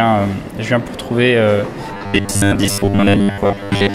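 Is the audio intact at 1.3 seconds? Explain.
Yes, at 1.3 seconds the audio is intact, with no dropout, click, distortion or other fault at that moment.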